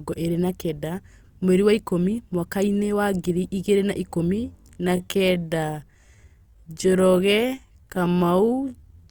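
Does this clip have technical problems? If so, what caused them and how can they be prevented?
Yes. From 4.28 s to the end at 9.10 s, right after "wa ngiri igĩrĩ na", there is a time-stretched section. The speech suddenly slows to about 0.63 times its pace, yet the pitch stays put. It drags. This is likely software lengthening the audio to fill a slot by repeating short slices. To prevent it, edit or re-record the passage to the needed length instead of stretching it.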